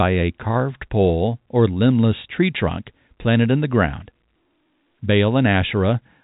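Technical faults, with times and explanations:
No technical faults can be heard in this speech.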